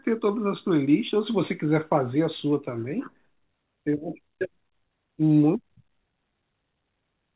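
Nothing technically wrong turns up in this bit of speech; it's simply gone over a call path, and the way everything above about 4 kHz is missing fits a narrowband phone codec such as G.711 A-law.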